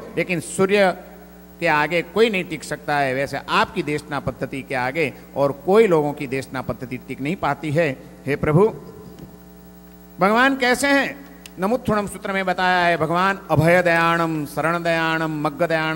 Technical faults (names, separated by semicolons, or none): none